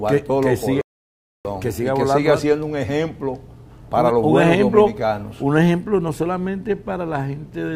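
A rebuffering stall runs from 0.81 to 1.45 s. The player exhausted its downloaded audio and paused until more data arrived, so the sound drops abruptly to silence and then picks up exactly where it left off. Nothing is skipped, but about 0.64 s of dead air is inserted.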